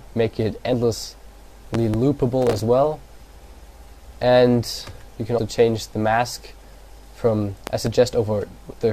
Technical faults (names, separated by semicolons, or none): compressed frames skipped; loud pop; processor overload crackle